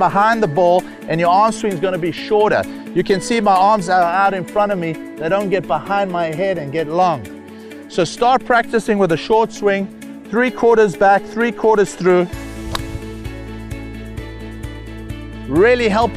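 No technical faults can be heard anywhere in this audio. There is no moment along the timeline that stands out as a problem.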